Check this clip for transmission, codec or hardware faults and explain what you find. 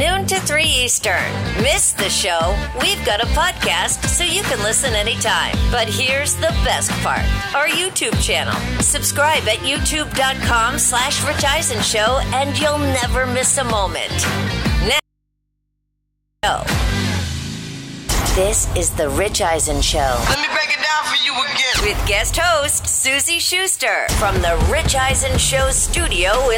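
One fault is present: an audio dropout to a faint residue between 15.00 and 16.43 s. The signal cuts out abruptly for about 1.44 s and does not fade. Only mains hum remains, roughly 55 dB below the normal level, before the sound returns just as suddenly. Because the hum persists through the break, the path after the loss stayed live. The likely cause is a momentary loss of the source or a connection upstream, which left an open input picking up hum.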